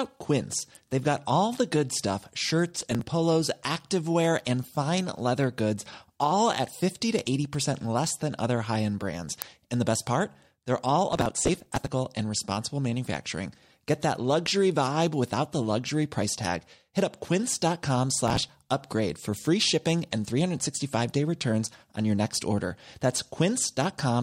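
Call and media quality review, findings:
Processor overload crackle, 2.76–3.01 s, 11.09–11.87 s, 18.28–18.49 s. Gritty tearing over the speech, then clean recovery each time. Audio engine/DSP thread overrun: many consecutive buffer deadlines missed, each dropped buffer skipped outright, leaving a hard-edged gap. The spacing suggests buffers of about 5 ms. The longest burst, at 11.09 s, runs nearly 0.8 s and accounts for several dozen misses. The shorter bursts at 2.76 s and 18.28 s account for roughly ten to fifteen misses each.

Uninitialised buffer, 9.42 s. A single sharp, loud digital splat, under a millisecond long. Playback/output buffer handling: a block went out before audio was written into it, so stale memory played as samples. The duration fits a block of about 32 samples.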